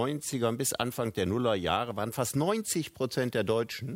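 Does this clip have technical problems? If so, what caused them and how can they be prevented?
No, there are no audible technical faults in this clip, so there is no cause to trace and nothing to prevent.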